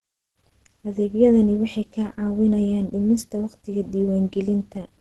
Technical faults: Opus compression

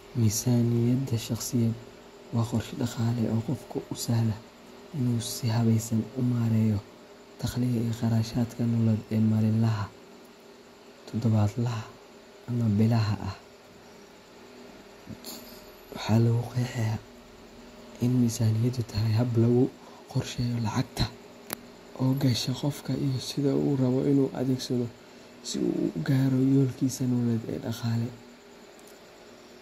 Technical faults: none

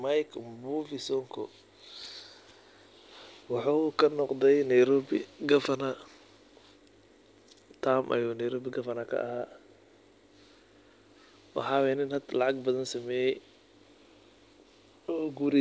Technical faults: none

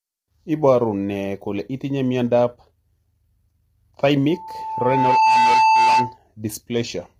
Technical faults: low-delay AAC compression; loudspeaker feedback squeal

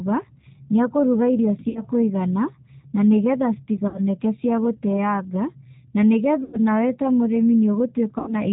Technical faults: G.729 codec; VoIP packet loss concealed by the speech codec

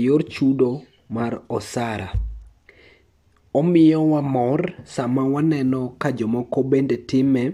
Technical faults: none

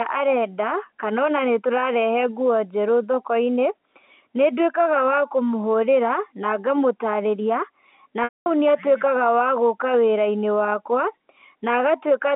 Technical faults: packet loss with pitch repetition

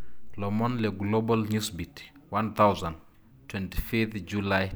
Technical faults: none

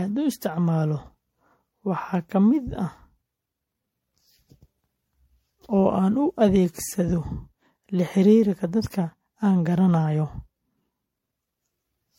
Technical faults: generation loss

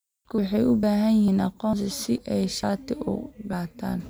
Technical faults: audio missing between chunks

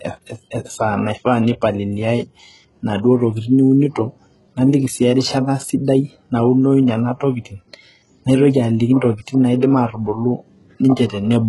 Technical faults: low-bitrate audio saved at a high bitrate

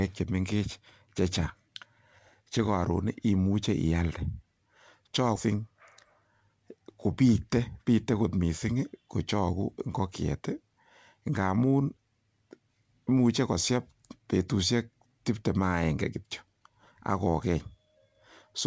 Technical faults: skip ahead

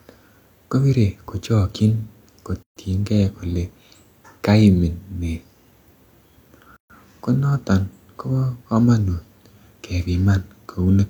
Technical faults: gap at a join of encoded pieces

